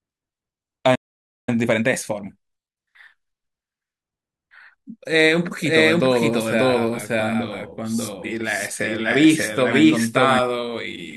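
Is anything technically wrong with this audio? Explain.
Yes, three things stand out. From 0.95 to 1.49 s there's a playback stall: the speech just drops out for about half a second mid-flow. The player most likely ran dry of data or had its thread blocked, so output went silent until it recovered.

Right after, from 1.49 to 2.53 s, you get time-compressed catch-up. The player trims its backlog by snipping out small pieces and cross-fading over the gaps, so the speech runs about 1.5 times fast at normal pitch.

Then from 5.47 to 10.39 s there's a doubled audio track. A second full-band copy trails about half a second behind at roughly the same level, with no decay or room colour. It cuts in and out abruptly, likely from a slower second capture path or a misaligned edit.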